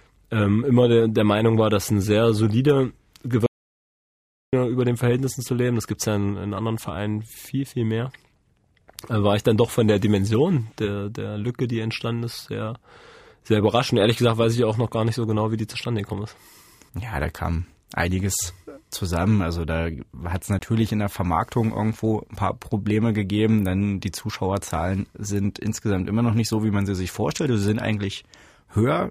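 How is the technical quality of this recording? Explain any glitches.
Two glitches stand out in the speech. At 3.46 to 4.53 s, right after "dass ein sehr solider", an audio dropout to silence wipes about 1.06 s to silence, likely a lost input link, before "über den" resumes. At 20.59 s, after "da hat es", a 20 ms block of digital silence, likely an unfilled output buffer, cuts out and back with no fade before "in der".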